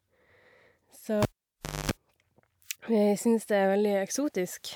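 A speech recording in which the decoder skipped compressed frames at 0.77 s: the audio jumps ahead roughly 150 ms, which fits about three 46.4 ms frames. From 1.22 to 1.91 s, a live cable was pulled and plugged in again. A pop is followed by about 640 ms of near silence, including a 241 ms burst of 50 Hz mains buzz as the tip touches, then a second pop when the sound returns.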